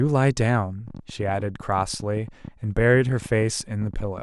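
From 0.88 to 4.19 s, a train of clicks, around forty, ticks at about 10.3 per second, unevenly spaced, roughly as loud as the speech. Their matching shape, unlike random crackle, points to likely interference.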